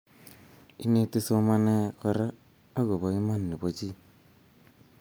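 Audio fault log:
No audible faults detected.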